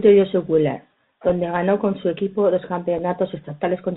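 The whole clip passed through the narrowband Bluetooth CVSD headset codec, which fits a 64 kbps link. Its one-bit slope tracking cuts everything above 4 kHz, leaves s sounds scratchy, and lays a granular hiss under the speech. At 1.29 s, just before "ganó con su equipo", and again at 2.98 s, just after "con su equipo dos", a Bluetooth headset packet was lost and repeated. The chip re-decoded the previous 3.8 ms of bits, each time producing a single small tick.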